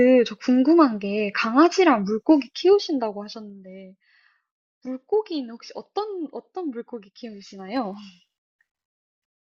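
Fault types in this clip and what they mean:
Zipper noise: the level moves in unsmoothed steps, about ten per second, 1 dB each as it falls roughly 15 dB near 2.6 s and 2 dB each as it rises similarly near 7.5 s, each step ticking. The waveform shows a staircase envelope; the spectrogram shows faint vertical broadband lines.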